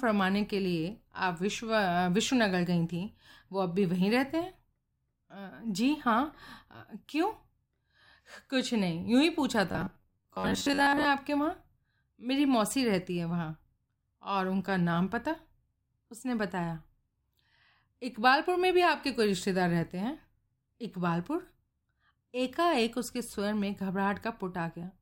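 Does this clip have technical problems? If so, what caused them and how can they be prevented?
Yes, from 9.68 to 11.07 s the speech turns into robotic sound from repeated short buffers: a stiff metallic buzz pinned near 94 Hz. That's likely a starved buffer looping a chunk of about 11 ms, with roughly half the real audio skipped. A larger playback buffer prevents it.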